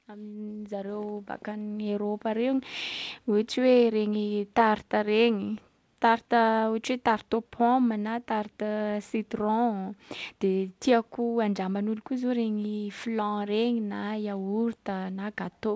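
Speech heard through a call path whose content stops at 8 kHz, consistent with a wideband codec such as G.722, carries an automatic gain rising fault from 0.05 to 2.57 s. The gain control judged the opening input too quiet and lifted its gain by about 12 dB over roughly two and a half seconds, so the voice and the background noise floor swell upward together. Level settles once the gain stops climbing.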